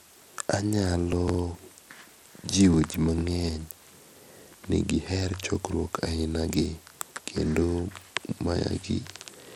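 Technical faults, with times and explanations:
Throughout, Bluetooth SBC compression: the audio was likely carried over a Bluetooth link using the SBC codec at a starved setting, consistent with a bitrate near 96 kbps. With so few bits to share across its sub-bands, the upper bands lose out first and the lower ones are quantised coarsely, so the speech has a plainly audible dull, unsteady top end where treble flickers in and out, with a gritty, grainy noise and aliased hash clinging to it.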